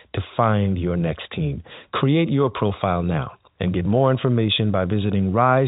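No technical faults are audible.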